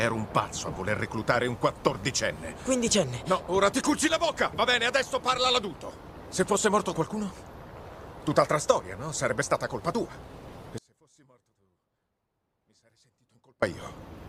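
An audio dropout to a faint residue runs from 10.78 to 13.62 s, about 2.84 s. The wanted signal cuts out abruptly, leaving only a faint leak far below normal level, roughly 35 dB down. This likely means the signal feed broke while the downstream path stayed live.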